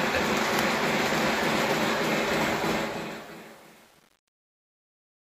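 From 2.74 s to the end at 5.37 s, the fade-out shows truncation distortion on a fade. The gain ramp is requantised to too few bits without dither, which fits an 8-bit word length. From 2.83 s onward the waveform collapses into coarse square steps as the level drops, so the tail turns gritty instead of decaying cleanly.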